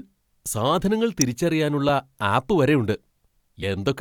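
A nearby switch, motor or static discharge likely arced at about 1.21 s, and the audio line picked up that brief burst of electrical energy. This is an electrical switching spike. It is heard as a sharp, very short snap laid on top of the speech, lasting only a few milliseconds, just before "തിരിച്ചറിയാനുള്ള ആപ്പ് വരെയുണ്ട്". It stands apart from the voice as an added click, not a change in the speech itself.

At about 3.62 s, the decoder never played a few frames of the compressed stream, either because they were absent from the file or because it rejected them as corrupt. This is compressed frames skipped. About 70 ms of speech is simply gone, so the talker seems to lurch forward in time.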